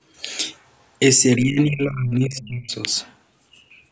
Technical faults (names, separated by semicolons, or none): other side's voice leaking through; speech suppressed in double talk